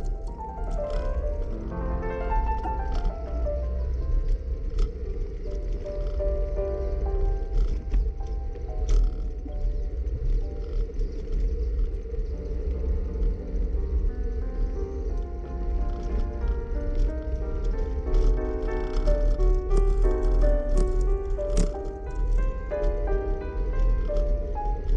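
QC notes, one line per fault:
2.64 to 2.67 s and 11.92 s, corrupt frame decoded. Damaged bits in about two compressed frames each time were played anyway. Misread codes put energy at wrong frequencies. The first is a fairly loud glitch, peaking near -20 dBFS. The second is a faint, brief glitch, near -45 dBFS.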